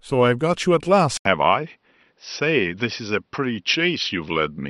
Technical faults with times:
1.17-4.69 input switched to a poorer device

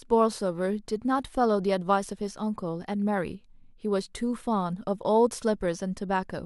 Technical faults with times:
none

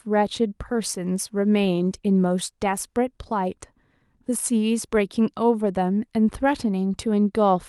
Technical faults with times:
0.69-3.01 call bitrate drop

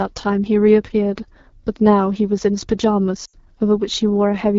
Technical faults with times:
0.00-4.59 AMR wideband (HD Voice) codec
3.25-3.36 lost AMR speech frames

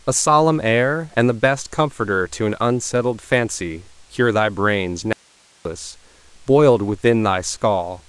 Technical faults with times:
5.13-5.65 audio dropout to a faint residue

